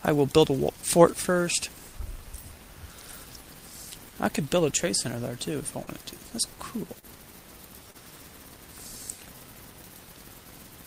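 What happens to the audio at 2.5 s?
Nothing goes wrong at 2.5 s; the audio plays through that moment intact, with no dropout, click or distortion to be heard.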